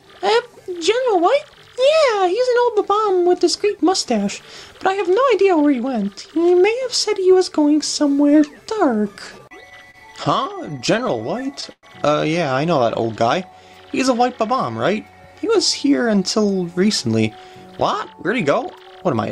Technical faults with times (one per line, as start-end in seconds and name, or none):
9.27-11.85 repeated stalls (stutter)
12.83-13.90 jitter buffer slow-down
15.85-17.23 jitter buffer speed-up
17.71-19.30 jitter buffer speed-up